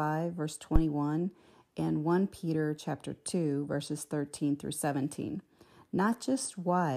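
A phantom power thump lands at 0.76 to 0.82 s in this speech. A supply voltage was switched on a live input, and the sudden step passed through the coupling capacitors as a deep low thump, peaking around -11 dBFS and dying away within about 15 ms.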